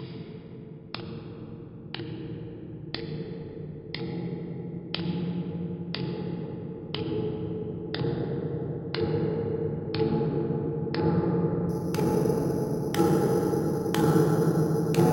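From 11.69 s to the end at 15.12 s, the rate was raised by simply repeating each sample with no smoothing filter, imaging from sample-and-hold upsampling. The pattern points to a step from about 11 kHz to 44.1 kHz, and because that ratio isn't a whole number the repeats fall unevenly. Mirrored copies of the spectrum therefore appear, the first spanning roughly 5.5 to 11 kHz, about 23 dB below the sound. They are heard as a metallic fizz whose level follows the sound.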